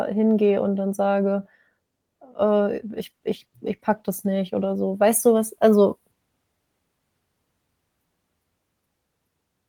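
From 2.95 s to 4.83 s the speech loses its polish, turning coarse and smeared for nearly two seconds before clearing again. This is a call bitrate drop: the connection's estimate of available bandwidth fell, so the encoder was instructed to spend fewer bits per frame and quantised the signal more roughly. The degradation points to the rate falling from around 32 kbps to roughly 18 kbps, holding there for about 1.8 s before recovering.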